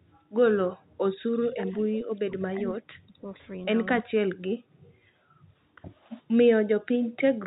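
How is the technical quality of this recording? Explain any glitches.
The recording has two recurring faults, both from hands-free echo control, carried over a telephone-band G.711 link.

Echo leak appears at 1.33 to 1.81 s, 2.70 to 2.75 s and 4.83 to 4.92 s. The echo canceller on a loudspeaker side likely failed to fully cancel its microphone's pickup and returned the residue down the line. You hear a faint ghost copy of the speech trailing by 231 ms. It is about 20 dB below the main speech in the first stretch and about 35 dB below in the two later short scraps.

Speech suppressed in double talk runs from 1.84 to 3.42 s and again from 3.99 to 4.21 s. With both sides talking at once, the canceller likely could not distinguish the local talker from loudspeaker echo, so it attenuated everything. The speech drops sharply, by roughly 35 dB at its deepest, and breaks up or vanishes in pieces for around one and a half seconds in the first stretch and a fifth of a second in the second.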